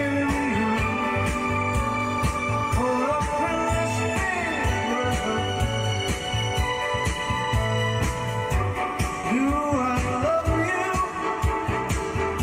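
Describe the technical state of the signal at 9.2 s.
At 9.21 s the sound briefly smears and wobbles for about 40 ms, ending at 9.25 s. This is short concealed packet loss. A stretch of the call arrived too late for the decoder, so the receiver filled the gap by extending what it had just played. About 20 ms was patched this way and roughly 20 ms was simply lost before the real audio was blended back in.

Underneath, the same moment carries a faint buzzing pulse, around 150 pulses per second and roughly 30 dB below the main sound. It rises and falls with something other than the audio itself. This is computer activity noise. Changing load in the processor, graphics card or mouse shifts the ground that the audio circuit shares with them, and that movement leaks into the recording as a buzz.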